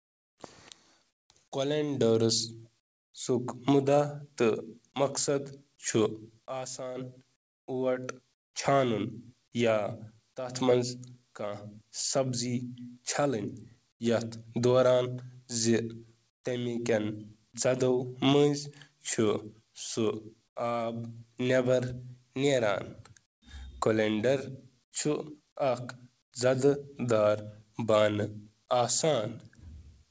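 Comfort noise in place of the background appears in the pauses at 0.0–1.3 s, 2.8–3.14 s, 7.36–8.54 s, 13.92–14.0 s, 16.3–16.44 s, 20.48–20.56 s, 23.26–23.42 s and 24.84–26.32 s. The real background gives way to smoother synthetic hiss, quieter by about 13 to 21 dB where measurable, likely from discontinuous transmission filling silence. On a spectrogram these gaps show as uniform, textureless noise blocks with abrupt edges, capped at 8 kHz like the rest of the call-codec audio.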